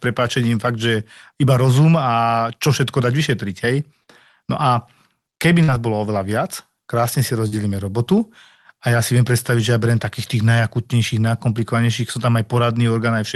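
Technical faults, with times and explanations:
4.03–4.10 s, 5.63–5.71 s and 7.48–7.55 s, short concealed packet loss: each spot has a brief smear or wobble where the speech seems to stretch for an instant before blending back, and a short consonant there can drop out. About 40 ms of audio arrived too late to decode each time, so the receiver extended the preceding sound, following its pitch or as shaped noise, then crossfaded back into the real signal.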